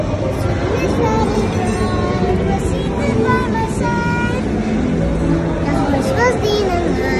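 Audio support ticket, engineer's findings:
GSM phone buzz, 5.07–6.90 s, steady, about 35 dB under signal. Raspy 217 Hz burst rate, not a 50/60 Hz mains multiple. Audio input stage rectifying nearby 2G call transmissions.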